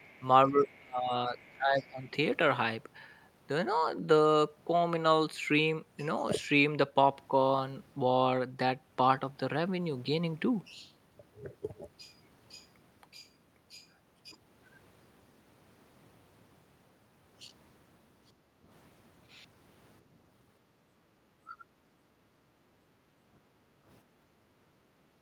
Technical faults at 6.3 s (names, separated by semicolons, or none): none